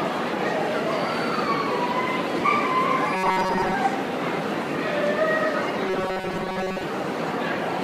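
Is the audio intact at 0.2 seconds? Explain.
Yes, at 0.2 seconds the audio is intact, with no dropout, click, distortion or other fault at that point.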